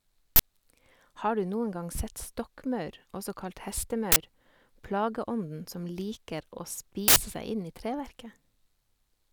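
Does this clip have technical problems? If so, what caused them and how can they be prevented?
Yes. An uninitialised buffer plays at 0.36–0.40 s, 4.12–4.16 s and 7.08–7.16 s, where stale memory blocks of 40, 40 and 80 ms are read out as loud digital noise. These appear as dense slabs on the waveform and broadband vertical bands on the spectrogram. Zero-filling buffers before output prevents it.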